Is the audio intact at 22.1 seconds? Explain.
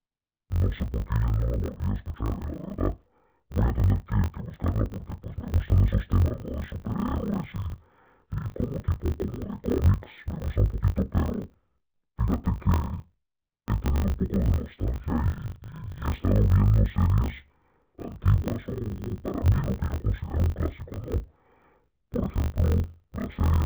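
No. Interleaved audio read as planar affects the whole clip, including 22.1 s. Each 20 ms block's halves play at half speed, so the speech sounds an octave low, dull and robotic, with a 50 Hz buzz.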